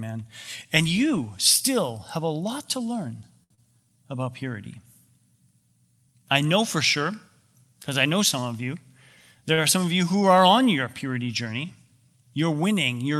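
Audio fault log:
3.43–3.52 s, short stall from a late packet: Just after "a lot to learn", a packet arrived late and the jitter buffer ran dry. The receiver held the last sound for about 68 ms, then resumed from the same point, so nothing is lost but the sound lingers with a slight buzz or dip. On a spectrogram the harmonics run flat and unchanging for that stretch. The waveform shows a repeated cycle.
3.54–3.59 s, short concealed packet loss: Immediately after the stall and before "about purity", about 60 ms of audio never reached the decoder in time. The receiver covered about 30 ms of the gap by extending the preceding sound and blending back into real audio, and delay shortened by roughly 30 ms. This is heard as a brief smear or wobble with a slight jump forward. A spectrogram shows a blurred patch and a seam at the rejoin. The waveform shows a synthetic stretch with a splice.
9.54–9.60 s, short stall from a late packet: Just before "are some of you", another late packet emptied the buffer. 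The last sound was stretched by about 38 ms and 6 ms was trimmed when playback caught up. This is heard as a held moment with a slight buzz or dip. On a spectrogram the frequency content is frozen and smooth for a short stretch. The waveform shows a near-periodic repeated pattern ending in a small discontinuity.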